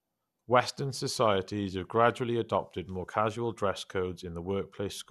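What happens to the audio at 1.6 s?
At 1.6 s the speech sounds dull and gurgling, with a grainy edge and nothing above about 12.2 kHz, as it does throughout the clip. This is likely MP2 compression at a rate near 80 kbps, which switches off upper sub-bands and coarsely quantises the rest.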